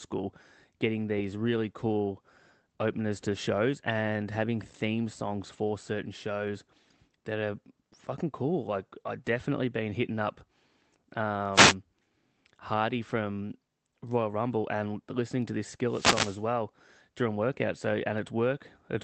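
Wireless microphone noise hits break into this speech recording at 11.53–11.75 s and again at 15.88–16.44 s, just after "and listening to this". Each sounds like a swish of static as the radio link fades and receiver noise rises. The audio is band-limited to about 8 kHz by the call codec.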